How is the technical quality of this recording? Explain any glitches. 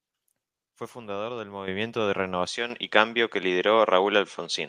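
The recording has two kinds of fault: sudden level jumps and a drop in quality partway through.

At 1.68 s and 2.70 s, the microphone volume stepped up by about 9 dB and about 7 dB. The input gain was raised in one step, so the speech and background jump together. The waveform envelope widens abruptly at each point.

From 2.47 s to the end, the sound turns duller and a little quieter, with no gap at the change. This is likely the input switching to a poorer device. On the spectrogram, the band narrows, and there is a faint new noise floor far below the speech.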